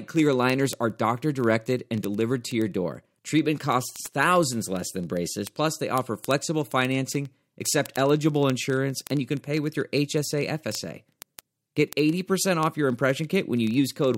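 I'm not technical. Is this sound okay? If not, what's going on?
No, there's a steady, fast ticking running under the speech from 0.13 s to the very end, roughly every 30 milliseconds. These are word clock ticks: two digital devices run on slightly mismatched clocks, and each time they drift apart, one sample gets skipped or doubled.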